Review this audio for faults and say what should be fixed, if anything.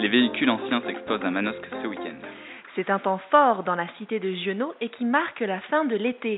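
No faults turn up anywhere in this recording, so nothing needs fixing. It can be left as it is.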